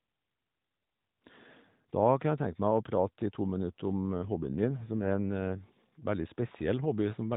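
At about 4.12 s the speech turns rougher and buzzier, with a more synthetic edge, which sounds like an AMR rate drop, with the codec falling back from its 12.2 kbps narrowband mobile mode to something near 5.9 kbps. The band stays put with no gap, and it recovers at 5.66 s.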